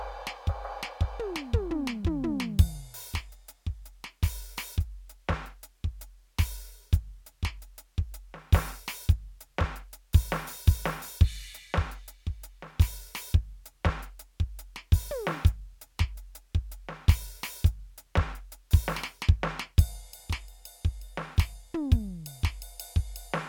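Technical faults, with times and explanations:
No technical faults detected.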